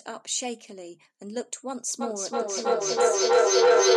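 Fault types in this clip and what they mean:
Feedback howl: from 2.01 s, a microphone-loudspeaker loop gains level each trip, swelling into a tone near 500 Hz that pulses about three times a second.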